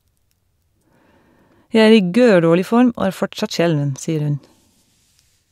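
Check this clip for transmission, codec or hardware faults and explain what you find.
No faults heard anywhere in the speech, so there is nothing to report.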